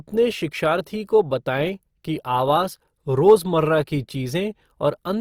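Across this speech clip the sound is rough and grainy, with a noisy fizz in place of clean detail, though the band stays wide with content up to about 20.2 kHz. It is likely Opus compression in music mode, at a rate fitting roughly 24 kbps.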